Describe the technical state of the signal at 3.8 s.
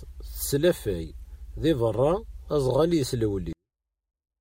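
A 24-bit alignment error runs from 3.53 to 4.41 s: low-byte 24-bit samples read as 32-bit drop the speech about 48 dB instantly, undistorted, unlike a fade.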